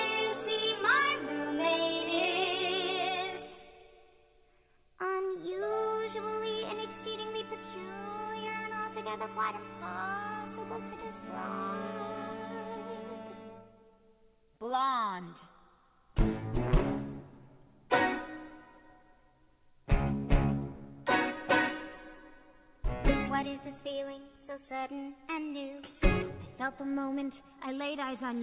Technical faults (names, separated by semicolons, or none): none